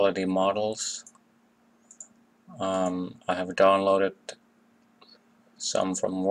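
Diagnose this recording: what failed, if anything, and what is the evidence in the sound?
Nothing in the chain shows a fault: no stage, from wiring and conversion through buffering, processing, network, storage and playback, leaves any audible evidence in this recording.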